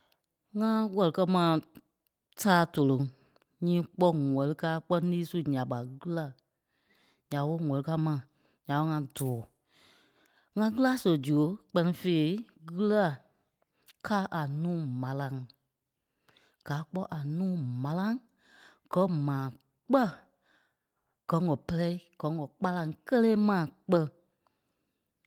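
No technical faults can be heard anywhere in this speech recording. Nothing in the audio points to a dropout, glitch, distortion or other break in the signal.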